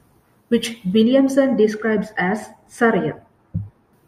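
From 1.03 s to 3.93 s, the speech turns dull and muffled. This is de-emphasis applied wrongly. A treble cut meant for pre-emphasised audio hit audio without it, or was applied twice. The response slopes smoothly down, about 13 dB lower at 10 kHz than at 1 kHz.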